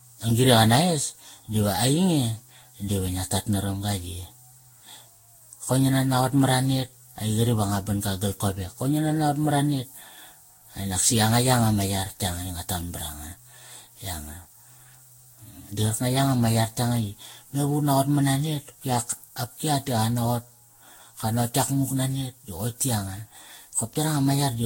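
Across the whole speech clip the sound is swirly, smeared and hollow, with blurred attacks and nothing above about 16.6 kHz. This is generation loss, likely from roughly ten passes through a lossy codec such as Vorbis at around 60 kbit/s. Each pass requantises on a shifted frame grid, so noise and spectral holes pile up. A single encode at that bitrate would sound cleaner. The compounded hollowness and smearing point to repeated transcoding rather than one low-rate encode.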